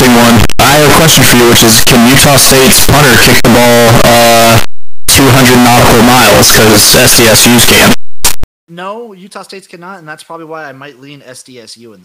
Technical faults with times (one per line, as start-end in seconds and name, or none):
0.00-8.44 signed and unsigned mixed up